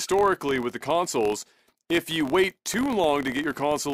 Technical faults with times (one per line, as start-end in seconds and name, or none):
0.00-3.94 filter restarted on every block